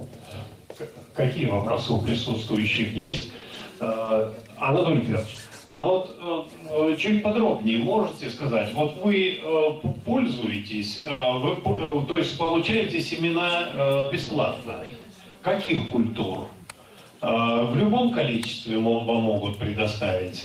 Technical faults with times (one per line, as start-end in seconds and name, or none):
2.75-4.59 repeated packet loss (robotic sound)
5.35 lost packet rebuilt from error correction
5.65-5.85 long network dropout
5.83-5.85 lost packet rebuilt from error correction
10.97-12.83 repeated packet loss (robotic sound)
13.99-15.91 repeated packet loss (robotic sound)